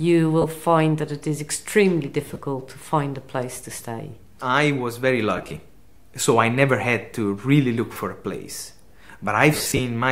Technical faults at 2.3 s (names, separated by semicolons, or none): lost LE Audio frames